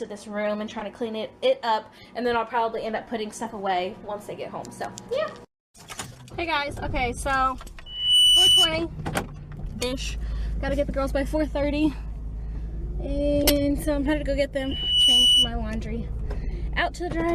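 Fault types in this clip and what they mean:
Corrupt frame decoded: Damaged compressed frames were decoded as-is, putting energy at the wrong frequencies in short bursts at 0.79, 10.22, 13.43 and 14.68 s, each fitting two or three frames. A spectrogram shows brief vertical smears of misplaced energy, and the waveform shows matching short irregular blips.
Loudspeaker feedback squeal: The microphone picks up its own loudspeaker, so a 3 kHz tone grows on its own to about 10 dB above the signal, from 7.86 to 8.75 s and 14.56 to 15.52 s. A spectrogram shows a bright horizontal line swelling over roughly 0.3 to 0.5 seconds.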